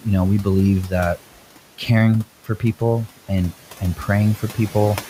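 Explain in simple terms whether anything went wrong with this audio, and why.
Noise suppressor artifacts run through the whole clip. The background room noise is pushed down between words and rises again underneath them.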